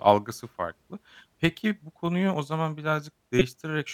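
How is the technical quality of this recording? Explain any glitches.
One glitch stands out near the end of the speech. From 3.39 to 3.41 s a loud, sharp glitch peaks around -5 dBFS: a corrupt frame decoded, where flipped bits in a couple of compressed frames produced energy at the wrong frequencies.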